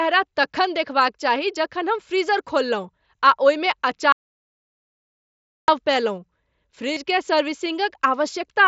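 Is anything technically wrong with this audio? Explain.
Yes, two faults are audible.

Audio dropout to silence, from 4.12 to 5.68 s, right after "फ्रीजर खोललहुँ आ ओहिमे". The input was most likely lost while recording carried on writing silence. The speech cuts off mid-flow into about 1.6 s of silence with no room tone, then resumes abruptly. Whatever was said in that gap is gone.

Concealed Bluetooth headset packet loss, from 6.93 to 6.97 s. Headset packets went missing, and the receiver filled the 30 ms gap by repeating the best-matching recent stretch of waveform, which fits a short run of about four lost packets. It's heard as a brief buzzy, held tone at full level with a slight warble where real speech returns, against the light grain of the mSBC headset codec carrying the speech.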